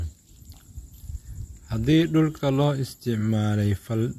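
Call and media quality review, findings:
Transcoding between lossy codecs, throughout the speech. Likely cause: an MP3 stage feeding an AAC-LC re-encode, with artefacts consistent with roughly 96 then 64 kbit/s. The AAC-LC stage spends bits on the MP3 artefacts and adds its own, so both sets are heard stacked. Nothing above 14 kHz, since the chain's lowest cut-off is kept.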